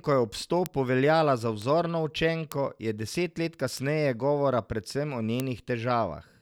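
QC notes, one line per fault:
0.66 s, bit error spike: one sharp tick at about -8 dBFS, consistent with a single flipped sample. On the waveform it is a lone vertical needle; on the spectrogram, a thin full-band stripe.
1.62 s, bit error spike: a quieter tick at about -20 dBFS just after "veljala za". It fits two adjacent corrupted samples, and shows as a narrow broadband line unrelated to the speech.
2.52 s, bit error spike: a loud click at about -8 dBFS. The sample value jumps by a power of two and snaps back, leaving a one-sample spike and a full-height vertical streak.
3.77 s, bit error spike: a tick at about -14 dBFS between "je deset let" and "govora predvsem o". The waveform shows an isolated spike, and the spectrogram a thin stripe across all frequencies.
5.40 s, bit error spike: a sharp click at about -8 dBFS just after "govora predvsem o". A single corrupted sample leaves a needle on the waveform and a broadband line on the spectrogram.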